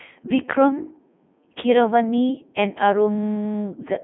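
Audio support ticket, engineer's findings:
Codec 2 vocoder damage, whole clip. Robotic, buzzy speech; heavy artefacts; band limited to roughly 150 Hz to 3.5 kHz, nothing above 3.8 kHz, fits the 3.2 kbit/s mode. Spectrogram shows a hard ceiling with overly regular, sine-built harmonics; the waveform is resynthesised, not preserved.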